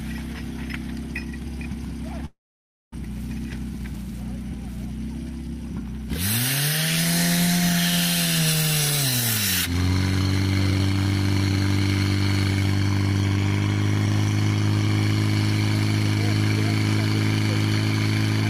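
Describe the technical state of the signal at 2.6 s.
At 2.6 s the signal is inside a long network dropout. It runs from 2.25 s to 2.96 s. The last sound before the gap is stretched into a fading buzz or hiss. That gives way to silence for about 550 ms. When audio resumes, roughly 400 ms of material is gone, not delayed. The likely cause is a stall in packet delivery. The receiver concealed it, then skipped ahead, and the timing shifted by around a third of a second.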